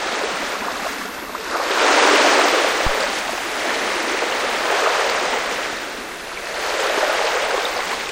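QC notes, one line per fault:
2.87–2.96 s, phantom power thump: there's a short, deep thud here, peaking at about -9 dBFS and dying away within about 21 ms. That's the classic sign of phantom power or another supply being switched on a live input. The sudden DC step gets pushed through the coupling capacitors, and what's left of it comes out as a low-frequency bump.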